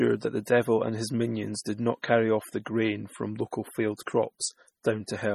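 Speech with heavy, likely MP3 compression damage running through the whole clip. Content above 19 kHz is missing. The sound is watery and swirly, because weak frequency components drop in and out from one frame to the next as the encoder zeroes whatever its hearing model judges unimportant. Attacks also smear. The damage is this severe because too few bits were available, which fits a low bitrate of around 32 kbps.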